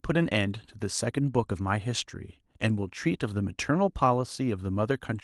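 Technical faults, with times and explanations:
Nothing technical trips up here; the recording just runs along without any glitches worth pointing to.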